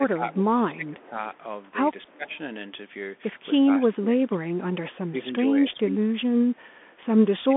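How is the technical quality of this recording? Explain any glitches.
Technical quality is poor: narrowband headset coding throughout, repeated level drops, and two faint echoes.

Bluetooth CVSD headset codec, throughout: the link encodes one bit per sample, up or down, with an adaptive step, which fits a 64 kHz CVSD stream. Nothing above 3.8 kHz survives, the band sits roughly 200 Hz to 3.5 kHz, and s sounds turn scratchy over a granular hiss.

Speech suppressed in double talk, at 0.00–1.16, 2.04–2.31, 3.63–4.64, 4.93–6.41, 6.85–6.89 and 7.47–7.56 s: an echo canceller likely mistook overlapping talk for echo and attenuated it. The speech dips by about 5 to 25 dB, thinning or cutting out in pieces.

Echo leak, at 2.10–2.14 and 2.32–2.38 s: a far-end loudspeaker's echo likely slipped past cancellation and returned about 0.3 s later. Faint scraps, about 35 to 40 dB below the speech, trail behind it.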